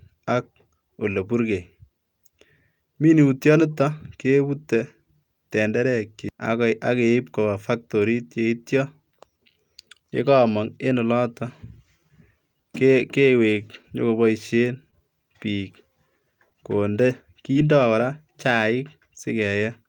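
From 13.51 to 13.93 s the speech shows repeated stalls (stutter): packets kept arriving too late for their playout time, so the jitter buffer emptied four separate times within that 0.4 s stretch. Each time the receiver held the last sound going until data caught up, adding about 42 ms of filler in total, roughly a tenth of the span, with the longest hold only 12 ms. Nothing is lost, but the rhythm hitches and drags. Unlike a single late packet, the snag recurs in a cluster.

At 14.91 to 15.01 s there is a short stall from a late packet. The network delay jumped by about 18 ms, so one packet missed its slot and the receiver stretched the preceding sound by 18 ms before resuming exactly where it stopped. About 7 ms was then trimmed back out to regain timing. It comes across as a single sound held slightly too long, with a faint buzz or dip, not the repeated catching of the stutter just before it.

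At 17.53 to 17.57 s comes a short concealed packet loss. Here audio really went missing, about 20 ms of it, and the decoder papered over the hole with about 15 ms of synthesised continuation before blending back into the real signal. The result is a brief smear or wobble, and a short consonant there may drop out. Unlike the two stalls, which only delay sound, this one removes some.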